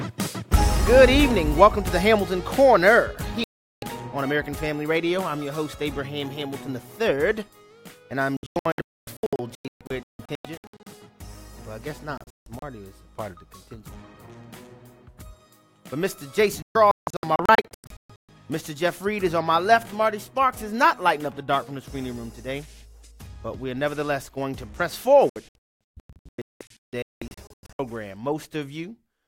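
At 3.44 s the audio mutes cleanly for about 0.39 s, a digital broadcast dropout where the receiver silenced itself after losing valid frames. The same failure returns as clusters of short holes at 8.37–10.87 s, 12.18–12.63 s, 16.62–18.29 s and 25.30–27.80 s, the longest single gap about 0.26 s. It sounds like stuttering cut-outs with material missing. The spectrogram shows full-band blank columns, and the waveform drops to a flat line.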